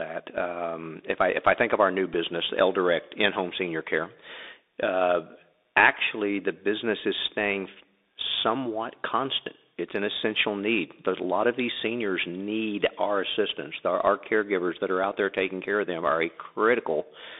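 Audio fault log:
throughout: Bluetooth CVSD headset codec. The speech sits in a narrow telephone band of roughly 250 Hz to 3.7 kHz, with a granular hiss beneath it and scratchy s sounds, which fits a 64 kbps one-bit delta stream. Unlike a clean low-pass filter, loud bright sounds distort because the adaptive step can't keep pace.
2.14 s: Bluetooth headset packet repeated. A single lost packet, about 3.8 ms long, was filled by decoding the previous packet's bits again, leaving a small tick. Because it is one repeat and not a run, there is no steady buzz near 267 Hz, and unlike a dropout the sound never goes silent.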